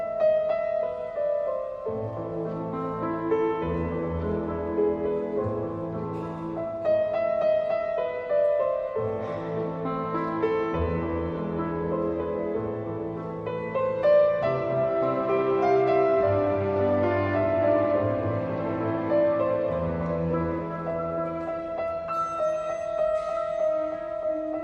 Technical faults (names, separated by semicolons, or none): none